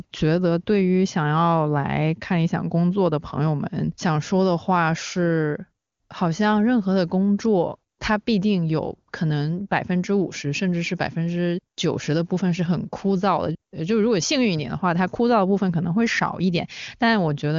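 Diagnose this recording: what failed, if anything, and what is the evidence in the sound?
Nothing failed in this recording.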